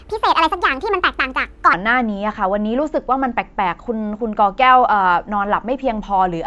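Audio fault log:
0.00–1.73 s, wrong sample rate: speech runs 1.5 times too fast and 7 semitones high, which fits 16 kHz audio played at 24 kHz unconverted. A spectrogram shows harmonics and formants stretched upward by half, with the waveform squeezed in time.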